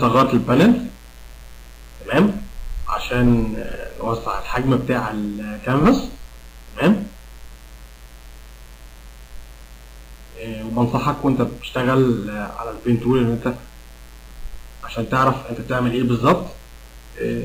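A mains buzz runs through the whole recording, built on 60 Hz and sitting roughly 30 dB below the wanted sound. It has a steady, raspy edge rather than a smooth hum because sharp switching spikes enter the signal twice per mains cycle, at 120 Hz. Those spikes spread energy across the 60 Hz harmonics well into the several-kilohertz range, pointing to a dimmer, rectifier or unshielded cable coupling into the audio path.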